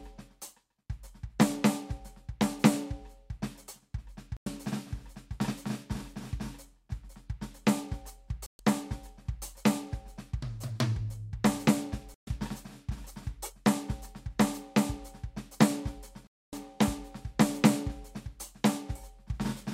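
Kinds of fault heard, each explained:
Digital broadcast dropout: the receiver lost good frames and muted, so the music drops to silence around 4.4, 8.5, 12.1 and 16.3 s, the last gap about a quarter-second long.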